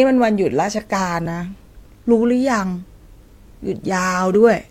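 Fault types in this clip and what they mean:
Overlap between stream segments: the time stamps on two consecutive chunks of the stream claimed the same stretch of time, so the player discarded what it took to be a duplicate, even though that audio existed only once. Here about 42 ms of the speech, from 1.26 to 1.30 s, is simply missing. The waveform jumps straight across the gap, producing a tiny skip where the speech lurches forward.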